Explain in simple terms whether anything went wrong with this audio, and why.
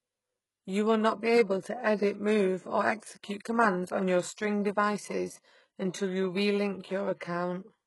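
Yes. The speech sounds like it has been through HE-AAC compression, a heavy squeeze to save space, and the damage runs through the whole clip. The encoder likely kept only the lower part of the sound and made up the treble by copying lower bands upward. Unlike ordinary heavy compression, which makes speech dull and muffled, the treble here stays bright but false: s sounds come out gritty, metallic or lispy, and nothing is left above about 11.5 kHz.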